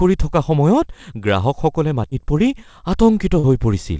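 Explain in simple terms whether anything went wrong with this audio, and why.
Two short dropouts were patched over, a fault called short concealed packet loss. Around 2.10 to 2.13 s, about 20 ms of the speech never arrived in time, and again at 3.39 to 3.45 s about 40 ms went missing. Each time the receiver guessed the gap by stretching the sound just before it, then eased back into the real audio. You hear a brief smear or wobble, about twice as long the second time.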